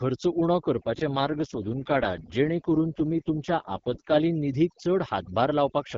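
Overdone noise removal runs through the whole speech clip. The suppressor gates bands it mistakes for noise, taking quiet speech detail with them. The background becomes near-silent with twinkling specks. A spectrogram shows blotchy, isolated flecks between phrases and ragged, holey harmonics.

From 0.76 s to 4.25 s an AMR rate drop makes the voice rougher, raspier and more synthetic, with no gap or change in bandwidth. The sound points to the AMR-WB link falling from 12.65 to 6.6 kbit/s. The spectrogram keeps its 7 kHz ceiling but shows smeared, grainier harmonics until the rate recovers.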